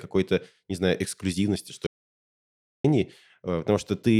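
At 1.87 s, right after "не знаю эксклюзивности что", the speech cuts out into an audio dropout to silence. For about 0.98 s, to 2.84 s, there is nothing. No room tone remains. The input was likely lost while recording continued. Then speech resumes mid-flow.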